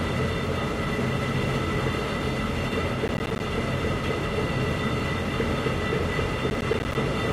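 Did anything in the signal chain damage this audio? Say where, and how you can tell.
Yes. Processor overload crackle at the driver or buffer stage, 3.08–3.4 s and 6.5–6.95 s. Missed buffers of about 10 ms drop out as hard-edged silent gaps.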